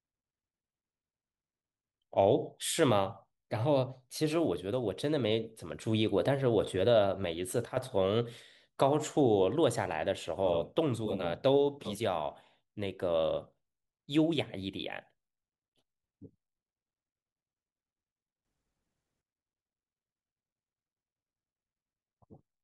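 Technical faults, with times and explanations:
7.65–7.77 s and 18.45–19.22 s, sudden gain jump: the speech and the background noise drop together by about 9 dB at the first point and rise by about 12 dB at the second, each step with no fade. The likely cause is a gain setting or bit shift applied instantly without a ramp. On a waveform the envelope steps down, then up, in a single sample. A spectrogram shows every band brightening or darkening at once.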